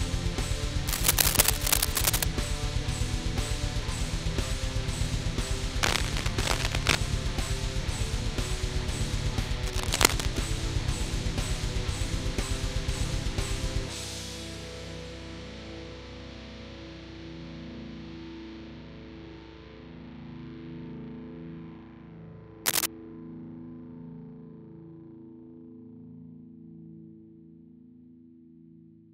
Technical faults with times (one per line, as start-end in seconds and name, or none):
0.87-2.23 cable scratch noise
5.83-6.97 cable scratch noise
9.66-10.38 cable scratch noise
22.65-22.86 cable scratch noise